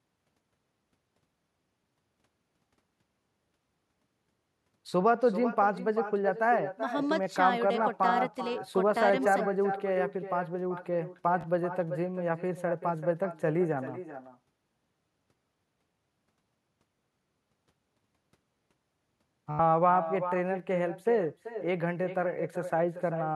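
Echo with no canceller runs throughout. The far end's loudspeaker leaks into its microphone. Each phrase returns about 0.4 s later, about 10 dB quieter.

Bluetooth stutter hits at 11.41 to 11.44 s and 19.51 to 19.59 s. Late packets made the receiver repeat its last slice, giving a brief buzz before the speech jumps ahead.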